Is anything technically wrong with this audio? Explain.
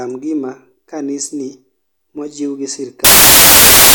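Yes. From 3.05 s to the end of the speech, the sound gives way to loud, harsh broadband noise. These are samples built from the wrong bytes: the bytes of each sample are being combined out of order or from a shifted position, so the rapidly fluctuating low-order bits land in the high-order place and dominate every value.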